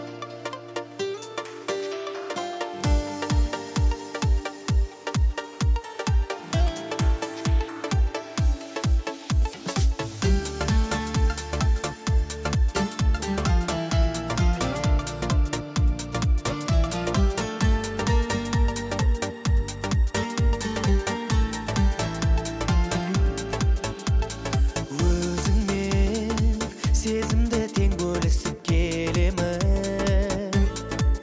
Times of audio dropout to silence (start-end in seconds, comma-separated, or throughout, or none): none